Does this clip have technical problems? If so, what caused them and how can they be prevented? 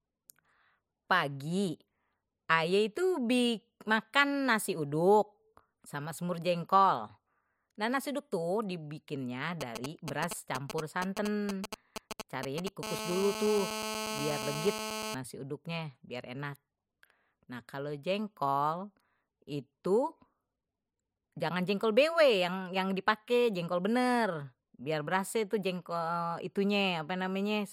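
Yes. GSM signalling bursts run from 9.61 to 12.69 s, right after "nasi uduk tuh dibikinnye": galloping ticks and brief 217 Hz buzzes, nearly as loud as the speech, as a nearby 2G phone's short transmission groups are rectified by the audio circuitry. Keeping phones away from the microphone and cabling, or switched to flight mode, prevents this.

GSM phone buzz follows from 12.83 to 15.15 s, just before "uduknya biar enak": a steady, raspy 217 Hz buzz rich in harmonics, about 6 dB below the speech, as the phone's continuous call-mode pulses are demodulated in the audio path. Shielded, balanced cabling and distance from active phones prevent it.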